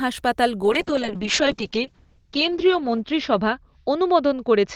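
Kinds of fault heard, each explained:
Call bitrate drop: the call's bandwidth estimate fell from 0.64 s, forcing the encoder from 32 kbps down to 7 kbps, where it stayed for about 2 s. Coarser coding makes the speech rough and watery, and the audio band narrows from 20 kHz to 8 kHz, muffling it through the end.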